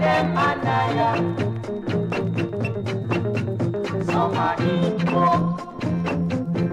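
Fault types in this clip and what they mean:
Train of clicks: a run of short, similarly shaped impulses riding on top of the audio from 4.17 s to 6.72 s, heard as uneven ticking. The clicks arrive at about 7.5 per second but with irregular spacing, some twenty in all, and their peaks stand roughly 5 dB above the programme level. The likely cause is interference from nearby equipment or a faulty connection or power supply injecting pulses into the signal path.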